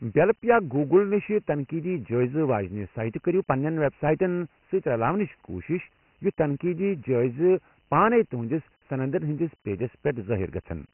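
Throughout, the speech passes through Dialogic VOX ADPCM, heavily damaged: coarse 4-bit steps at a low rate cut everything above 3 kHz, fitting 6,000 samples a second, and leave gritty hiss trailing the speech.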